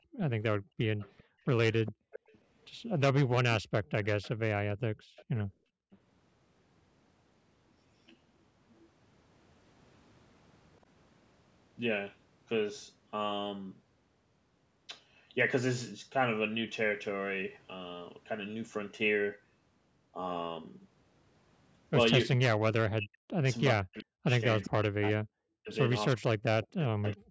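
From 0.0 to 2.11 s, background gated by the echo canceller: the room sound dips by up to about 34 dB, around 0.7 s in total, while far-end audio plays. From 0.99 to 2.38 s, an echo leak adds a copy of the speech delayed by 407 ms, roughly 15 dB down, likely from incomplete echo cancellation. It recurs from 3.51 to 4.35 s. Gating returns from 4.94 to 5.91 s, dipping about 35 dB, with a fainter echo, roughly 25 dB down, from 5.16 to 5.97 s. From 22.8 to 27.04 s, speech suppressed in double talk cuts the talker by as much as roughly 40 dB, about 3 s altogether, likely because the canceller confused overlapping speech with echo. A brief echo fragment falls at 24.64 to 24.70 s.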